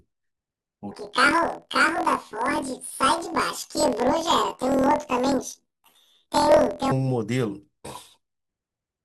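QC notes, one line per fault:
0.91 to 6.91 s, planar audio read as interleaved: the speech jumps up an octave with a rough, robotic buzz at about 42 Hz. Each 24 ms block of left-then-right samples gets read as alternating pairs, so it plays twice at double speed while overall pacing stays right.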